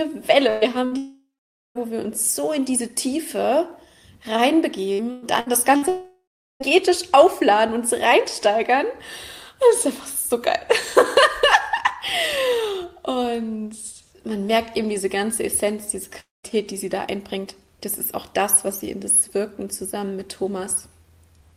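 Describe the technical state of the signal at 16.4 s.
At 16.4 s you're in the middle of a gap that runs from 16.2 to 16.46 s, most likely a long network dropout. The sound smears on for a moment as a fading buzz or hiss, which fits the receiver stretching the last bit it got over roughly 230 ms of the gap, with about 180 ms of near silence in there too. When the audio picks up again after 16.46 s, about 240 ms of the original is simply gone.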